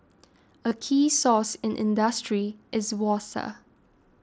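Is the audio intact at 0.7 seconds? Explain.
No. From 0.69 to 0.71 s there is concealed Bluetooth headset packet loss: about 22.5 ms of audio never arrived, and the receiver filled the gap by repeating the best-matching stretch of the preceding ~20 ms, heard as a brief buzzy hold, then a slight warble.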